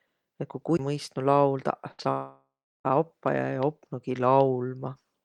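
At 0.77 to 0.79 s there is a CD skip. The sound mutes very briefly, for about a few hundredths of a second. The laser has jumped to another turn of the disc's spiral. Playback then carries on from a different point, so the audio lurches.

From 1.91 to 2.0 s a burst of packet loss occurs. About 80 ms of audio never plays. The receiver fills a 71 ms hole by carrying on the last sound and fading it, as a held buzz or dying hiss. The audio then resumes further on.

At 2.03 to 2.07 s comes a short concealed packet loss. Around 20 ms failed to arrive in time. A 21 ms patch, extended from the preceding sound, blends back into the real audio. It is heard as a quick smear, and a brief consonant may drop out.

From 2.11 to 2.86 s the sound stops being real. The last sound is stretched into a fading buzz or hiss, and the final 350 ms or so is silence or a low steady noise. About 740 ms is gone when the audio returns. 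The likely cause is a long network dropout.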